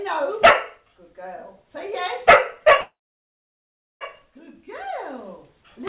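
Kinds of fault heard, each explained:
Call audio freeze, 2.81 to 4.03 s: the sound trails into a short fading buzz, then about 1.07 s of silence, likely because delayed packets left the jitter buffer empty. Playback resumes exactly where it stopped, adding 1.2 s of delay with nothing lost.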